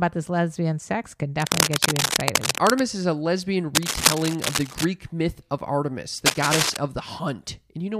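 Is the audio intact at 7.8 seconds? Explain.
Yes, at 7.8 seconds the speech is intact, with no audible fault at that moment.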